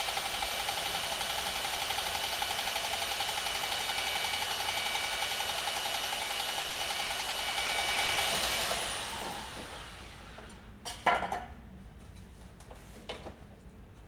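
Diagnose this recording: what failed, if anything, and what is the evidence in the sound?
From 6.61 to 8.18 s the sound turns choppy and robotic, with about a dozen short holes, none longer than 30 ms. This is repeated packet loss at the network stage. Each hole is bridged by stretching the preceding sound, covering about 270 ms, while another 180 ms is simply missing.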